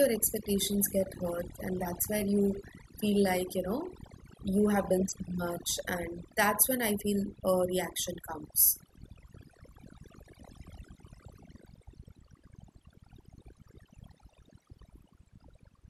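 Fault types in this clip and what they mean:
overdone noise removal: aggressive noise reduction pulls bands near the noise floor down or out, leaving a lowered background that breaks up into twinkling specks.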